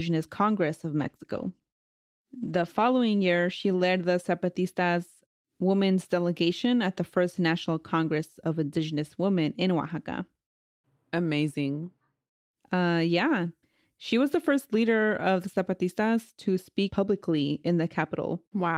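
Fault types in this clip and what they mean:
Call bitrate drop: From 1.0 to 3.75 s the speech turns coarse and muffled. This fits the encoder falling from 32 to 15 kbps.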